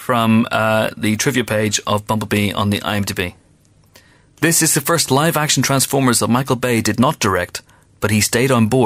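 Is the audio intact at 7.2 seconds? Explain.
Yes, at 7.2 seconds the speech plays through cleanly, with no dropout, click, distortion or other fault at that point.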